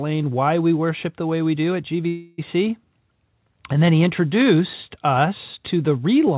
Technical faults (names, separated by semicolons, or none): call audio freeze